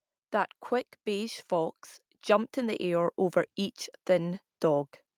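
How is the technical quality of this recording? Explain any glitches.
The recording has one glitch: automatic gain rising. From 1.04 to 3.22 s, the gain control judges the input too quiet. It raises its gain slowly, by about 7 dB. Speech and background noise swell together, growing steadily louder over those two seconds.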